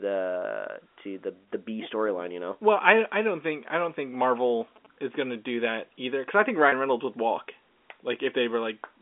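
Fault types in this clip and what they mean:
GSM signalling bursts: A nearby 2G phone's radio bursts get rectified by the audio circuit, giving a galloping dit-dit-dit of short buzzes at about 217 Hz, roughly 25 dB below the speech, from 3.67 to 4.87 s between "I I don't think" and "is going to do". A spectrogram shows groups of short vertical stripes with harmonic lines stacked on 217 Hz.
Packet loss with pitch repetition: A lost packet leaves a 30 ms hole at 6.69 s, just after "either because I think", which the receiver fills by repeating the last pitch period, so the sound briefly holds with a slight buzz. The waveform shows repeated, fading cycles and the spectrogram flat, frozen harmonics.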